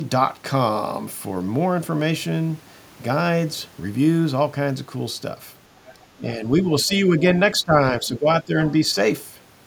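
It's a speech clip, and between about 5.8 and 7.0 s there's the other side's voice leaking through: a second voice at 5.77–6.06 s, around 25 dB under the talker, and again briefly at 6.93–6.98 s, around 20 dB under. That's likely the far end playing on a loudspeaker and the echo canceller not removing all of it from the mic. Right around that stretch you also get speech suppressed in double talk, with the talker dipping at 6.17–6.45 s (by up to roughly 10 dB), 6.61–6.69 s and 6.85–7.25 s (both roughly 5 dB), 7.63–7.74 s (roughly 20 dB) and 7.90–8.54 s (roughly 10 dB). Likely the canceller couldn't tell this talker from the loudspeaker echo and turned both down.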